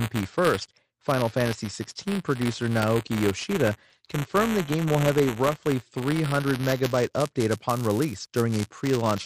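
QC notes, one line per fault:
Throughout, buffer tearing: writer and reader cross every period, splicing in audio from a lap earlier, so the speech carries a 172 Hz rattle, fitting a 256-sample buffer.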